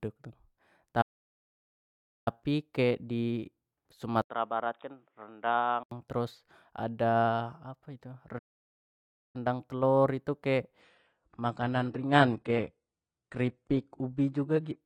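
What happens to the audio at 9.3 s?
At 9.3 s the speech is still inside a playback stall that began at 8.38 s and ends at 9.36 s, a dead gap of just under a second. The player was likely starved of data or had its thread blocked, so output went silent mid-flow until it recovered. On a waveform this appears as a flat line; on a spectrogram, as a clean vertical band empty across all frequencies, with abrupt edges on both sides.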